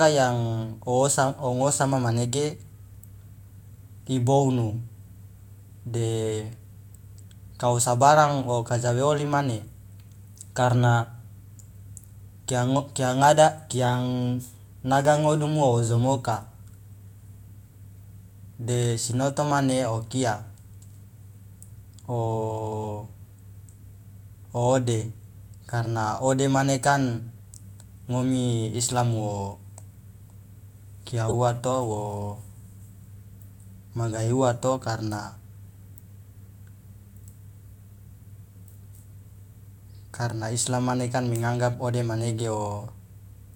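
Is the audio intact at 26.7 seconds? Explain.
Yes, the audio at 26.7 seconds is intact, with no dropout, glitch or other fault at that moment.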